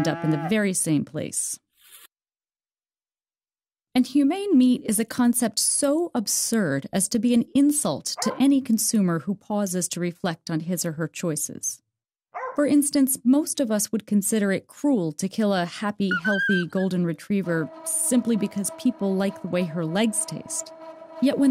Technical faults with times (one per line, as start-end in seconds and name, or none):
none